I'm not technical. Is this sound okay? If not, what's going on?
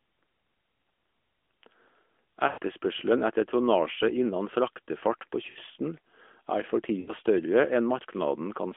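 No. The speech has lost AMR speech frames at 2.48–2.58, 5.50–5.58 and 7.00–7.13 s. The phone decoder stretches the last sound and fades it briefly instead of cutting to sudden silence.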